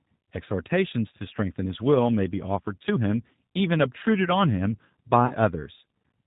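Throughout, the speech carries G.729 codec damage: an 8 kbit/s pulse-based rebuild that removes everything above 4 kHz, giving plainly audible roughness and a synthetic edge. From 5.26 to 5.33 s, VoIP packet loss is concealed by the speech codec. Roughly 40 ms went missing, which fits two lost packets. The decoder stretches its last frame into a fading buzzy tone or coloured noise before the speech recovers.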